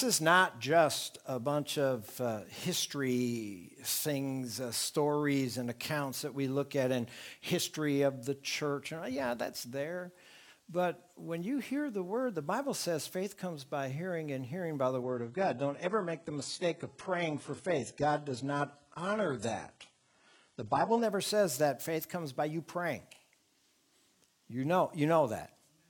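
At 15.03 s the stream drops to a lower bitrate, probably because the connection slowed, and the switch is abrupt with no gap. Until 21.03 s nothing reaches above 11.1 kHz and artefacts climb. That sound fits a fall from about 96 kbit/s AAC to a 12 kbit/s HE-AAC version.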